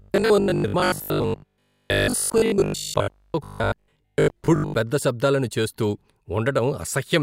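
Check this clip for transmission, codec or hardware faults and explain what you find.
One fault is present in this speech. From 0.02 to 4.74 s, just before "పెద్ద శబ్దాలను చేస్తూ", there is robotic sound from repeated short buffers: a stiff, metallic 50 Hz buzz loosely tracking the speech. Audio likely arrived too seldom, so a fragment repeated in place of most of the real signal, which fits a 20 ms buffer. Unlike plain dropouts, there are no silent gaps, only that fixed-pitch drone.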